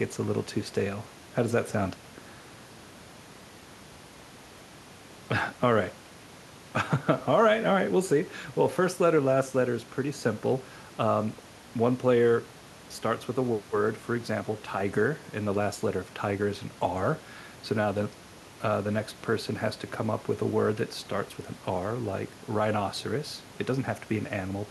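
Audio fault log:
No technical faults can be heard anywhere in the speech, and the signal holds steady in level and continuity throughout.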